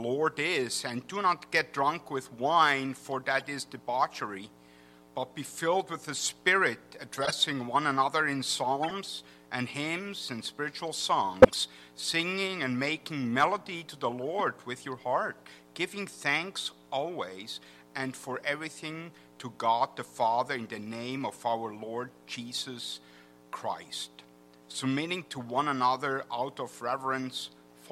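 Corrupt frames decoded produce short chirps and noise bursts at 3.39–3.45, 7.13–7.32, 8.83–8.92, 11.42–11.55 and 14.39 s. Damaged bits in each frame put energy at the wrong frequencies. The 11.4 s burst is loudest, peaking around -5 dBFS, and the 7.1 s one spans several frames.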